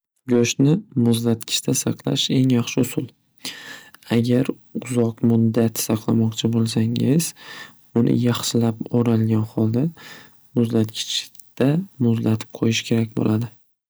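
Throughout the speech, a stage is driven about 2 dB past its limit, so a small fraction of peaks are cut flat: hard clipping, heard as brief crackle on loud moments.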